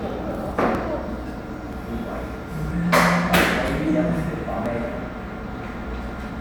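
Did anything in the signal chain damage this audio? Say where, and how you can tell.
Yes. There's audio missing between chunks at 0.75, 1.73, 2.70, 3.68, 4.66 and 5.64 s, about once a second. Each is a tiny skip, roughly 20 ms gone, with the sides butted together. That's likely the driver or buffer stage dropping samples at each chunk handover.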